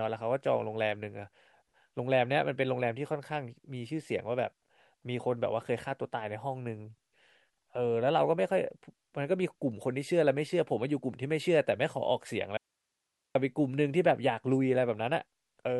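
At 12.57 s the speech cuts out abruptly and stays gone until 13.35 s, a gap of about 0.78 s. This is an audio dropout to a faint residue. The signal does not fade or pause. It disappears mid-flow, leaving only low hiss roughly 55 dB below the normal level. The likely cause is a brief loss of the source feeding a path that stayed live, so its noise floor carried through until the signal returned just as sharply.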